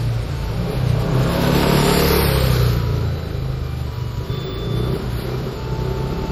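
Generation loss runs through the whole clip: the sound is swirly, hollow and smeared, with blurred attacks, likely from about seven rounds of MP3 re-encoding at a rate fitting 64 kbit/s. Each pass stacks new noise and spectral gaps, unlike the cleaner artefacts of single-pass low-bitrate coding.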